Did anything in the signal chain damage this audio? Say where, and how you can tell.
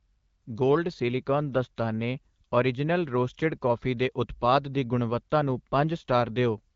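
No, nothing in the chain damaged this speech; it has passed through the AMR wideband (HD Voice) codec at 12.65 kbit/s, a rate where speech stays clear, and the codec leaves only light coding traces within its roughly 7 kHz band.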